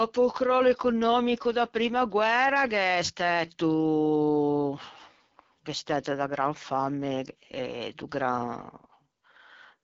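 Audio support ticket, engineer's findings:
AMR wideband (HD Voice) codec damage throughout the speech, plainly audible. Rough, raspy texture, consistent with one of the two lowest AMR-WB modes, which fits 8.85 kbit/s. Mechanism: a pulse-excited vocal tract model with too few bits for the excitation, plus noise-filled top band. Spectrogram: hard ceiling, nothing above 7.5 kHz; smeared, grainy harmonics below 6.4 kHz; diffuse noise-like energy between 6.4 and 7 kHz instead of clean harmonics.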